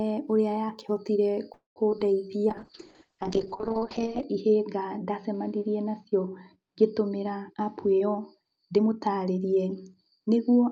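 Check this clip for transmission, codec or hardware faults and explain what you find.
The clip has four kinds of transmission fault: a call audio freeze, two short concealed packet losses, a call bitrate drop and a jitter buffer speed-up.

From 1.53 to 1.78 s, just after "ũrĩa yakĩhotire", a call audio freeze holds the sound as a fading continuation that ends in about 140 ms of silence. The likely cause is late packets draining the jitter buffer. Unlike packet loss, nothing is skipped. The audio resumes where it stopped, about 225 ms later than before.

Two short concealed packet losses follow at 1.90–1.93 s and 1.99–2.02 s. Each time, about 20 ms of audio never reached the decoder, and the receiver extrapolated the preceding sound before blending back. Each one is a brief smear or wobble, and the sound it replaced is gone, not delayed.

A call bitrate drop begins at 2.50 s and lasts to the end. 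The encoder went from 48 to 7 kbps, and the audio band narrowed from 20 kHz to 8 kHz, spending 1.73 s at the lowest rate. The sound turns muffled and watery. This is steady coarse coding, not a brief gap.

A jitter buffer speed-up runs from 7.48 to 9.47 s. The receiver trimmed pitch-period pieces to shed excess buffered delay, about a fifth of a second in total, so the audio plays at 111% speed. Pitch stays the same, which separates it from a clock or resampling error. The pace sounds hurried.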